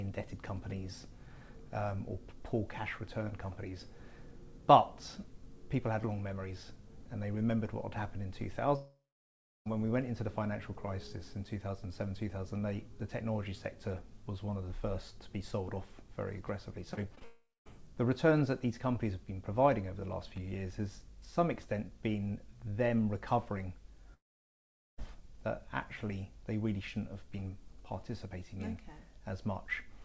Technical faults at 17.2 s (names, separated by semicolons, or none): short concealed packet loss; long network dropout